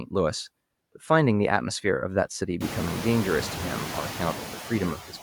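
Noise suppressor artifacts run through the whole speech clip: the processor pulls down whatever bands it judges to be steady noise by about 15 dB, so the background dips in the pauses and swells back under the talking, especially once the room noise climbs by about 24 dB around two and a half seconds.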